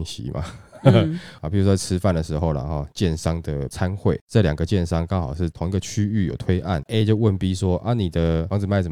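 No technical faults can be heard anywhere in this speech recording.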